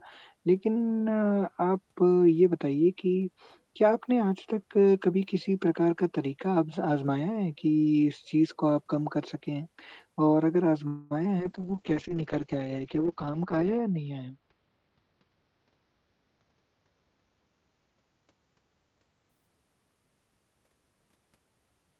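At 10.87 s the audio stalls for about 0.23 s, the last sound carried on as a fading buzz before the speech resumes intact. This is a call audio freeze, likely from delayed packets draining the jitter buffer. Nothing is lost, but the delay grows by that amount.

From 11.39 to 11.41 s there is short concealed packet loss. About 20 ms of audio failed to reach the Opus decoder in time, and the receiver patched the gap by extrapolating the preceding sound, producing a brief smear.

A call bitrate drop follows from 11.44 to 19.35 s. The encoder falls from 32 to 8 kbps, and the audio bandwidth narrows from 12 kHz to 8 kHz. The speech turns coarser and duller, worst during a stretch of about 2.35 s at the lowest rate.

Within the bitrate drop, from 14.24 to 15.50 s, a jitter buffer speed-up plays the speech at 119% speed with unchanged pitch. The buffer trims roughly 0.3 s of excess delay by cutting out short pitch-period segments, which makes the delivery sound hurried.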